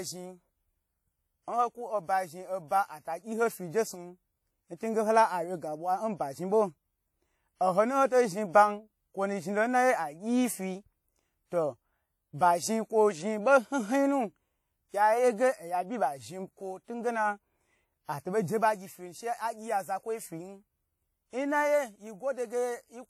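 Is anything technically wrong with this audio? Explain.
Yes. Throughout the speech there is ringing, washy smearing and hiss that swells with the signal, likely WMA compression at a low bitrate around 48 kbps. A spectrogram would show patchy, zeroed high bands and a hard cutoff near 18.9 kHz.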